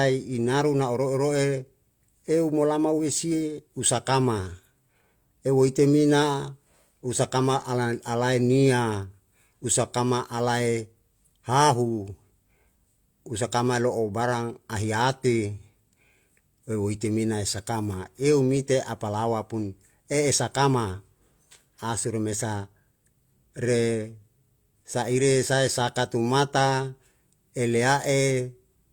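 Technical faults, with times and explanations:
No technical fault is audible anywhere in the speech recording, and the signal stays continuous and stable across its whole duration.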